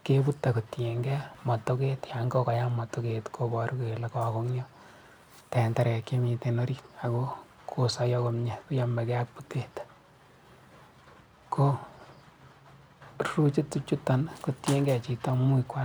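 Audio missing between chunks occurs at 1.35, 3.34, 7.33, 13.31 and 15.30 s. Each is a tiny skip where a few milliseconds of the speech vanish and the two sides butt straight together with no gap of silence. The skips fall on multiples of a 2-second spacing, which points to the recording likely being handled in 2-second chunks, with a sliver dropped each time one chunk closes and the next opens.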